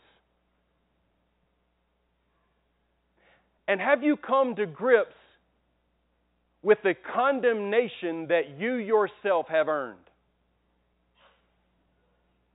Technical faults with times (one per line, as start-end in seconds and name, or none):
none